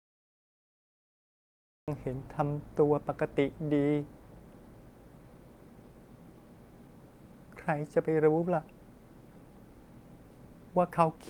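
Right at the top there's a cut-off start: nothing but dead digital silence until about 1.88 s, then the speech just slams in mid-sound. The capture evidently began late, so the onset has no natural attack or fade-in at all.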